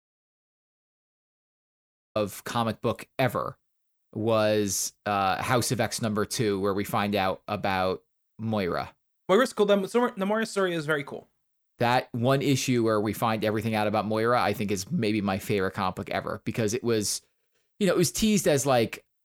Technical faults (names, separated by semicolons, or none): audio dropout to silence